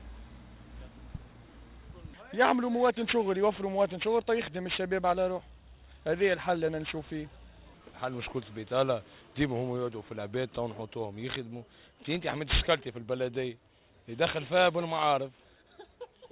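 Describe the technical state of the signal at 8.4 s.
At 8.4 s the audio carries aliasing, present across the whole clip. Content above a 4 kHz fold was never filtered out before downsampling, consistent with a drop from 44.1 kHz to 8 kHz, so it mirrors back as unrelated gritty, metallic tones roughly 15 dB below the signal. A spectrogram shows energy packed hard against the 4 kHz edge, with mirrored partials sloping the wrong way.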